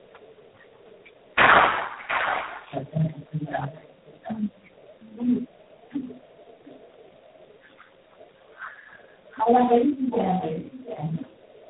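Speech clip marred throughout by tandem speech coding: nothing above 3.8 kHz, with roughness and warble beyond what one coder gives, which fits G.729A twice then G.726 at 24 kbit/s. At 8.51 to 8.57 s a very faint, discrete copy arrives 715 ms late, most likely an echo leak rather than room reverberation.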